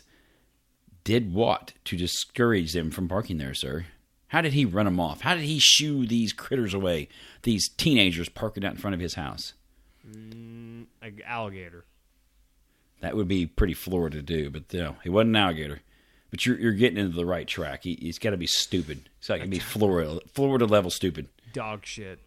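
No technical faults can be heard in this speech recording. There is no moment in it that calls for a time stamp or a description.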